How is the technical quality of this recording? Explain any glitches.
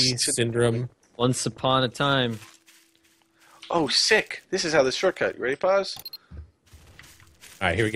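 Nothing stood out as a glitch or technical problem when listening to this recording.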